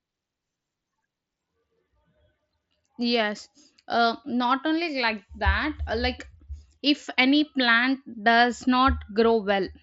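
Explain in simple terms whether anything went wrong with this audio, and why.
Nothing went wrong with this audio: it is ordinary speech carried over a Bluetooth headset link, and nothing in it points to a problem.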